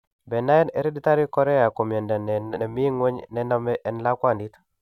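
No faults are audible anywhere in this recording.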